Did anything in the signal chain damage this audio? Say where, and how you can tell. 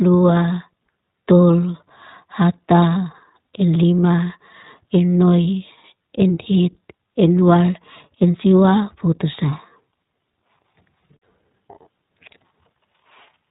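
Yes, at the codec stage: iLBC damage runs throughout, with rough, synthetic speech and a spectrogram cut flat at 4 kHz, which fits 15.2 kbps iLBC with 20 ms frames.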